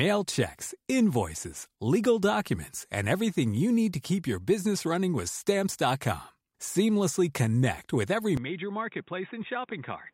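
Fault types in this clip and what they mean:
Input switched to a poorer device: right after "connect with every", around 8.37 s, the speech drops about 10 dB and goes dull, nothing above 3.8 kHz, likely a different microphone taking over.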